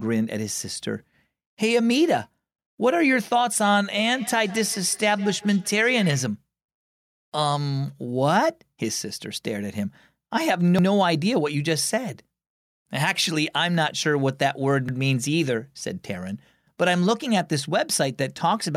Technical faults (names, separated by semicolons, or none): overlapping chunks; feedback echo between two devices